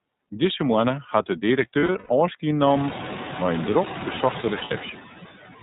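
From the start, the speech is band-limited with nothing above 4 kHz and has a slightly rough, synthetic grain. That points to the iLBC codec, which fits its 13.33 kbps mode with 30 ms frames. Each frame's excitation is coded on its own. The result is a coarse, synthetic texture rather than the swishy smearing of a transform codec.

Noise suppressor artifacts also run throughout. The steady background is pulled down by about 12 dB between phrases and lifts back under the speech. When the room noise rises by about 24 dB near 2.5 s, it still sits only about 12 dB below the speech, so the pumping becomes easier to hear. Unlike codec roughness, it tracks the pauses.

Lost iLBC frames come between 1.8 and 2.11 s, after "moanne hat de" and before "ôfskie nommen mei in". The dropouts are scattered across about 0.3 s, with the longest run about a tenth of a second. The decoder fills each gap by repeating the last pitch cycle with noise, which gives a held, breathy-buzzy vowel instead of silence or a click. 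Speech snaps back almost at once because iLBC frames stand alone.

A second, shorter burst of lost iLBC frames falls between 4.40 and 4.72 s, just after "nommen mei in drok". It brings the same brief buzzy sustain with clean recovery, with the longest run about 70 ms.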